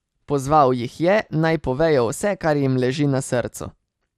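MP2 compression runs throughout this speech clip: a dull, gurgling, granular sound, likely from Layer II coding at a low rate near 80 kbps switching off upper sub-bands and coarsely quantising the rest.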